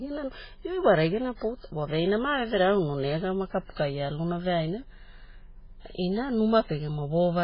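Throughout the speech, nothing is present above 5.2 kHz, and the remaining band sounds heavily watery and swirling, with smeared onsets. This is likely MP3 compression at a very low bitrate, around 16 kbps, with the encoder cutting treble and dropping weak spectral lines between frames.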